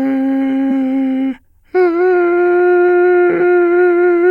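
Compressed frames skipped at 0.70 s: the music jumps ahead by roughly a fifth of a second, about ten whole frames, consistent with 23.2 ms frames that were missing or rejected by the decoder.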